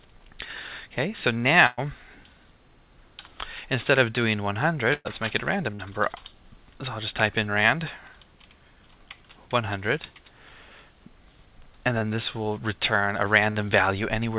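Burst of packet loss at 1.66 to 1.79 s: about 120 ms of audio never arrived, and the receiver stretched the last sound into a fading tail before jumping ahead. Another burst of packet loss at 4.93 to 5.07 s does the same, ending with a 10 ms dropout before the audio returns. Short concealed packet loss at 5.75 to 5.81 s and 11.99 to 12.03 s: 40 ms and 20 ms holes were patched by extending the preceding sound, heard as brief smears. A final, shorter burst of packet loss at 13.51 to 13.57 s leaves a 48 ms fade over 40 ms of lost material. All of it is heard through a call path with nothing above 4 kHz, which fits G.711 A-law at 64 kbps.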